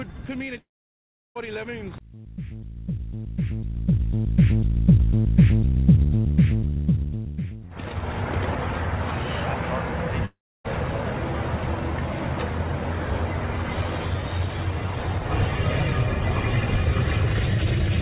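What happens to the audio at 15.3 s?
Nothing goes wrong at 15.3 s: the audio is intact there, carrying only the ordinary narrow band of the call path with nothing above 4 kHz.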